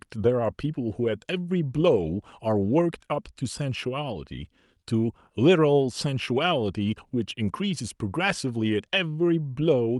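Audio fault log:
No fault to log in the speech.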